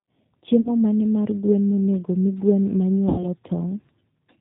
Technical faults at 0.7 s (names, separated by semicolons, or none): G.729 codec; VoIP packet loss concealed by the speech codec